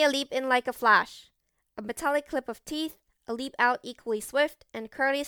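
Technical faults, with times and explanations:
Throughout, generation loss: the speech sounds swirly, smeared and hollow, with blurred attacks and nothing above 19.9 kHz. This is likely from about five MP3 re-encodes at a rate fitting 128 kbit/s, each requantising on a shifted frame grid so the damage accumulates.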